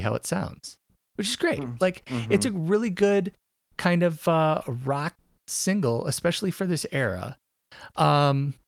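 Listening to this speech recording, nothing stood out as a technical problem at any point.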